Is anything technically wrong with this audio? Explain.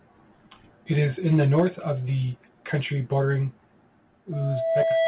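Yes. Three kinds of fault are audible, all heard through a narrowband call path with nothing above 4 kHz.

Microphone overload runs from 1.32 to 1.65 s, just before "of the country bordering". The peaks go about 3 dB past the converter's limit and a few percent of samples are flattened, likely because the input gain was set too high. The loudest syllables get a harsh crackle. Codec noise would be present throughout, but this crackle appears only on those peaks.

Microphone volume stepped down happens twice: by about 2 dB at 1.6 s, right before "of the country bordering", and by about 5 dB at 4.83 s, during the squeal. In each case the software likely cut the input level at once in response to an overloaded or very loud input. Speech and background drop together in a single step, not in a gradual fade.

A loudspeaker feedback squeal starts at 4.32 s and lasts until the clip ends. Sound from the loudspeaker reaches the microphone, and the loop gain exceeds one at 657 Hz. 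That single tone grows over about 0.7 s to roughly 5 dB above the speech. A steady hum would hold its level, but this tone swells.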